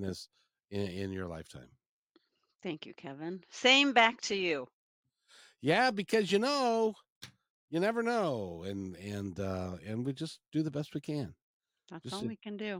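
No dropouts, clicks, distortion or other technical faults turn up anywhere in this speech recording.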